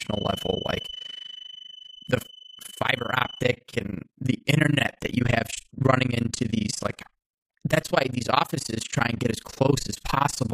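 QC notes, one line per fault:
throughout: overlap-add ripple. The speech swells and dips in level around 30 times a second, with a depth of about 60 dB. Frames were rejoined with an overlap that does not sum evenly, so each frame boundary dips. This produces a rough flutter.
0.00 to 3.51 s: feedback whistle. A thin, steady 3 kHz tone sits about 15 dB under the speech and swells and fades slowly in level. It then stops. The likely cause is a loudspeaker-to-microphone loop held just short of runaway feedback, ringing at one frequency.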